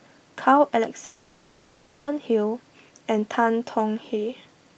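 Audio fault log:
1.05–2.09 s, long network dropout: roughly a second of audio never arrives, most likely lost in transit. The receiver covers the whole gap with concealment rather than silence. The last sound is stretched into a buzzy, hissy continuation that fades. Sound resumes at 2.09 s with that second of material missing. The surrounding audio tops out near 8 kHz, consistent with an Opus call path.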